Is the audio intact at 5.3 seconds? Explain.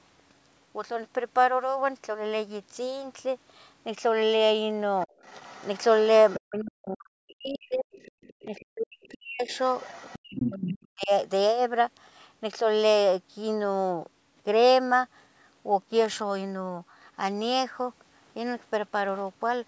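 No. From 5.01 to 6.68 s, covering 5.3 s, there is other side's voice leaking through: a faint second voice sits underneath the main speech, roughly 25 dB quieter. The likely cause is an echo canceller that failed to fully remove the far end's loudspeaker sound from the microphone. On a spectrogram it shows as weak, separate harmonic traces behind the main speech; the waveform shows only a slightly raised floor in the gaps.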